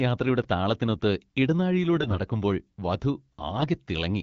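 At 0.42 to 0.44 s, chunks out of order: a tiny slice of speech, about 5.8 ms, plays roughly three chunks late. It sounds like a brief jumbled moment rather than a gap, since nothing is missing. From 1.96 to 2.20 s and again at 3.58 to 3.67 s, AMR bit errors make the HD Voice speech hoarse and gargly while pitch and level hold. These are short bursts, unlike the steady roughness of a low codec rate, and the second burst sounds more damaged.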